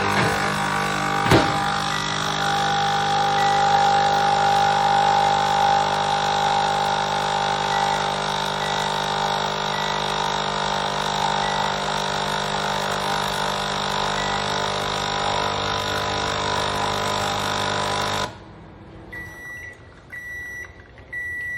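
Hard clipping occurs from 1.31 to 1.40 s, a burst of under a tenth of a second. Here the sound was driven about 8 dB beyond what the converter or processing stage could pass, so every peak in that stretch was sheared off flat at the ceiling. Those squared-off tops generate a spray of high harmonics, heard as a brief harsh, gritty crackle laid over the loud moment rather than a clean rise in level.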